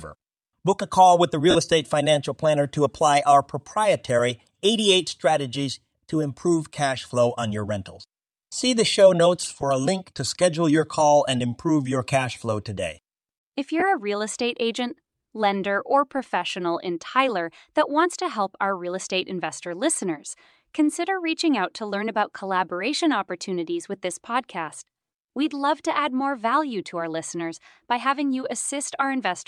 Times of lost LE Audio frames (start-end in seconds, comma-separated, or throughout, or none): 1.50-1.56, 9.61, 13.80-13.82